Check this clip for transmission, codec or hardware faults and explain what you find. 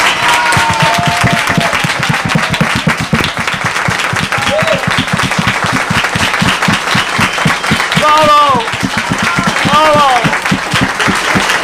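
One fault runs through the whole clip: hard clipping. The signal is pushed about 7 dB beyond what one stage can pass, so its peaks are cut flat. Roughly one sample in twenty hits that ceiling. The squared-off tops add high harmonics, heard as distortion on the loud sounds.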